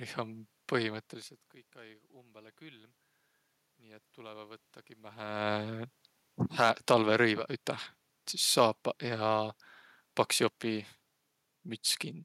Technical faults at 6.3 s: none

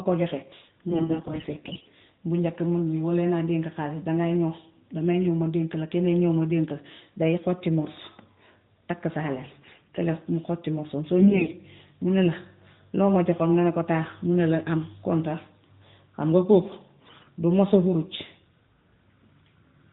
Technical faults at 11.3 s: AMR bit errors

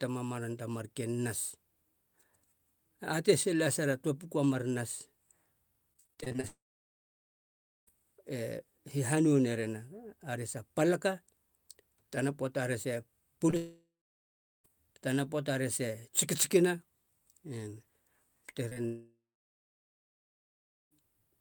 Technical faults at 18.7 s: short concealed packet loss

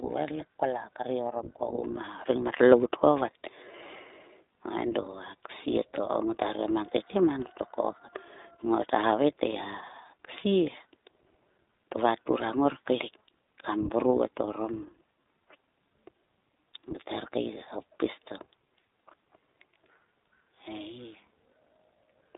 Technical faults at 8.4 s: iLBC codec

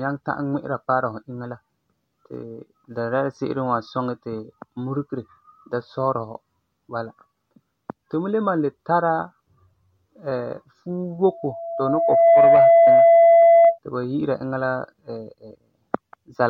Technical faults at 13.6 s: loudspeaker feedback squeal

